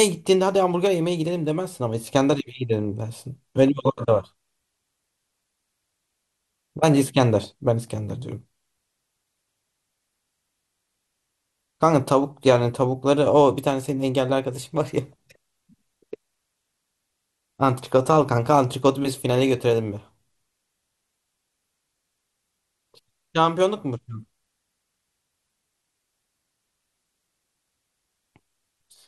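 From start to end the speech sounds dull and gurgling, with a granular grit. The upper frequencies come and go, flickering rather than holding steady. The likely cause is MP2 compression. The codec splits the audio into 32 sub-bands and shares out a tight bit budget, switching off starved upper bands and quantising the rest coarsely. The damage is plainly audible, which fits a rate around 80 kbps.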